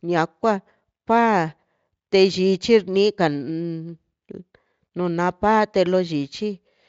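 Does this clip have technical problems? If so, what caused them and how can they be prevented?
No, nothing here goes wrong; the speech comes across fine, and the Speex encoding it went through sounds like a generous setting whose traces are faint at most.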